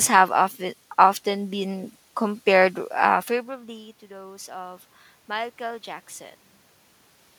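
Just after "often been compared uh", from 3.66 to 5.9 s, automatic gain rising sets in. The input had fallen by about 21 dB, so the gain control slowly lifts everything by about 4 dB, swelling voice and room noise together. The waveform's envelope and noise floor ramp upward gradually, and the spectrogram brightens evenly across all bands.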